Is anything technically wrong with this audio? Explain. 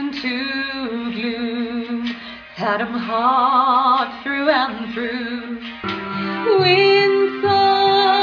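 No, the signal shows no technical faults at any point in the clip.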